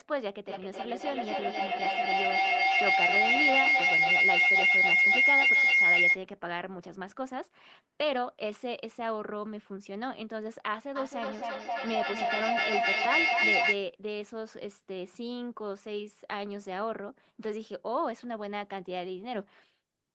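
From 0.47 to 6.23 s and from 10.96 to 13.82 s, feedback howl builds. Sound loops between a microphone and a nearby loudspeaker, gaining level each trip. It narrows to a tone near 2 kHz. It pulses roughly every 0.3 s and peaks about 9 dB, then about 7 dB, above the speech.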